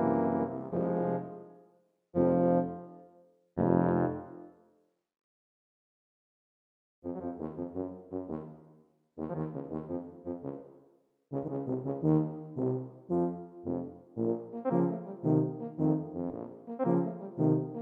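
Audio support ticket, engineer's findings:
No faults found on playback.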